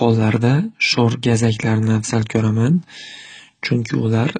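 AAC compression runs throughout this speech clip: nothing sounds above 9.1 kHz and the sibilants fizz and smear, likely from AAC-LC coding at a low bitrate, around 24 kbps.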